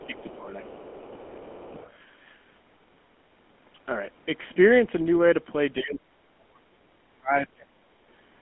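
It's a speech clip that has been through a GSM full-rate codec the whole way, with a narrow line band of roughly 200 Hz to 3.4 kHz, nothing up top, and that buzzy, gravelly roughness you get when the excitation is modelled with sparse regular pulses. It fits the old 13 kbps full-rate coder. There's speech suppressed in double talk at 0 to 0.14 s and 0.33 to 1.78 s, dipping by about 10 dB. From 5.81 to 7.88 s it's much harsher, down by about 35 dB, so the talker nearly vanishes. That's likely the echo canceller clamping down while both ends spoke. The other side's voice is leaking through faintly, about 25 dB under the talker, at 0 to 0.34 s, 0.81 to 1.6 s and 1.78 to 1.94 s. That's likely loudspeaker echo the canceller didn't fully strip out of the mic.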